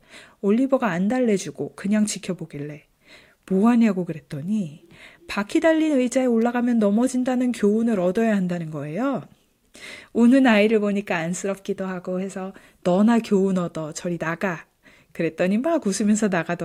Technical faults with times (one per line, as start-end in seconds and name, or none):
6.42 electrical switching spike